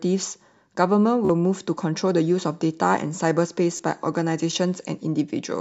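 Speech with two short Bluetooth stutters, at 1.25 s and 3.77 s: late packets made the receiver repeat its last slice, briefly buzzing over roughly 40 and 27 ms before jumping ahead.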